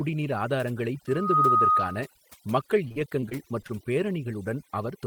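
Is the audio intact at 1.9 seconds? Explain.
No. A loudspeaker feedback squeal runs from 1.07 to 2.09 s: a loop gain above one at 1.2 kHz builds over roughly a third of a second into a steady tone about 10 dB above the speech. That swelling build distinguishes it from a fixed interference whine. Overdone noise removal also affects the whole clip: bands near the noise estimate are gated away, leaving a lowered, twinkling background rather than simple muffling.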